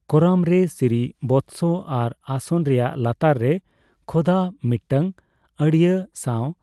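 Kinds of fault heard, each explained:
No faults are heard in this speech clip.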